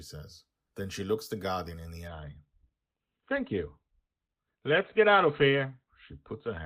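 From 2.07 s to the end, an adaptive stream at a lower bitrate takes over: treble abruptly vanishes above 4.2 kHz, consistent with a drop from roughly 64 to 12 kbit/s Opus, leaving a flat spectrogram ceiling.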